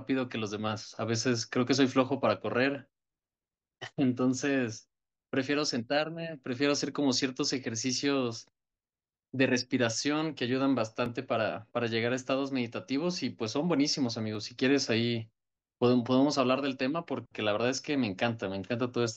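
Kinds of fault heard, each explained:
Dropped buffer (overrun): at 11.06 s and 14.35 s the speech skips ahead, losing roughly 20 ms and 10 ms, likely because the hardware overwrote samples before they were read. The waveform shows an abrupt, gapless jump; the spectrogram shows a thin vertical broadband line.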